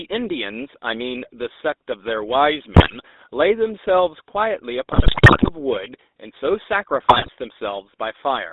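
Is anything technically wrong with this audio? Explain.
Yes. The whole clip has passed through the GSM full-rate codec, and three bursts of GSM bit errors damage it further.

GSM full-rate codec, throughout: The speech has been rebuilt from a vocal-tract filter driven by regularly spaced excitation pulses, with much of the excitation detail thrown away. This produces a buzzy, gravelly roughness, which fits a 13 kbit/s full-rate stream. The passband runs only from about 250 Hz to 3.7 kHz, so the sound is thin, boxy and lacks air at the top.

GSM bit errors, 2.74 to 2.96 s, 4.92 to 5.50 s and 7.02 to 7.31 s: Corrupted bits reached the decoder, scrambling the filter, pitch and gain parameters for a run of frames. Each corrupted frame comes out with a distorted spectrum or a sudden jump in level, so the speech breaks into squawks, pops and gargling. The burst at 4.92 s is the longest and most badly damaged.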